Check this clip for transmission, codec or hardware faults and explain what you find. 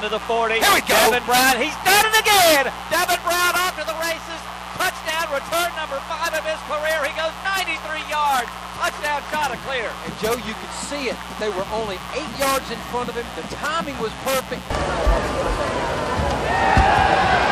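A mains buzz runs through the whole clip. The interference comes in at 60 Hz. The rectifier, dimmer or unshielded path behind it lets sharp switching spikes through on each half of the mains cycle. Those spikes carry a long ladder of 60 Hz harmonics up to several kHz, so the result is a raspy, steady buzz rather than a smooth low hum. It sits about 15 dB below the wanted sound.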